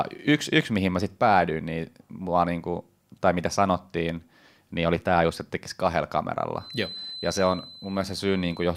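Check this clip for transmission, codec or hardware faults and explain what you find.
There is one fault, a feedback whistle from 6.53 s to the end of the clip at 8.77 s, beginning just after "just että tekisi kahdella". The loudspeaker-to-microphone loop was likely held at the edge of feedback, sustaining a thin, steady 4 kHz whistle that sits well below the speech and swells and fades slowly in level.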